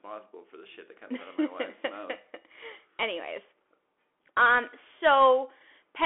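Speech that sounds thin, boxy and phone-like throughout, with nothing above about 3.7 kHz, little below 300 Hz, scratchy s sounds and a granular hiss, the codec damage plainly audible. This is a Bluetooth CVSD headset codec, whose one-bit up-or-down steps fit a 64 kbps narrowband link.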